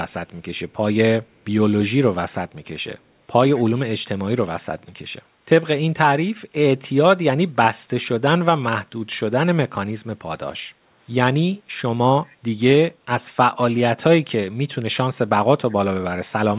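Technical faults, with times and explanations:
0.71–0.76 s, 1.33–1.45 s and 12.27–12.36 s, echo leak: The far end's echo canceller likely let some of its loudspeaker pickup through, so it was sent back. Each time, a faint, delayed copy of the speech surfaces about 198 ms behind the original, heard as a brief ghostly trace rather than a clear repeat. It sits around 40 dB below the speech in the first two scraps and a little stronger, near 35 dB down, in the last.
10.74–10.86 s, background gated by the echo canceller: While its loudspeaker was active, the echo canceller clamped the microphone down to keep echo out, then released it. The room sound behind the speech dips by about 7 dB for roughly a tenth of a second, a short hollow gap in the ambience that closes as soon as the canceller lets go. Within the telephone-band audio, which stops at 4 kHz, this dip is heard as a brief loss of room noise.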